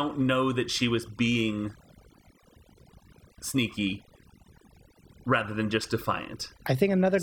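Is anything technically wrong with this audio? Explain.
Yes. Throughout the speech, overdone noise removal is at work: the noise reduction pushed individual frequency bands down to nothing whenever they sat near its noise estimate, taking the quieter parts of the voice too. The background drops and breaks up into twinkling specks.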